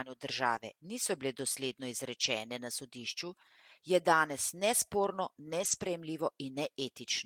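Around 0.55 to 0.57 s and 2.23 to 2.25 s, packets dropped but were rebuilt from error correction, so there's no gap, just a brief rough, noisier patch. From 5.59 to 5.89 s it's longer, about 160 ms patched from low-bitrate copies.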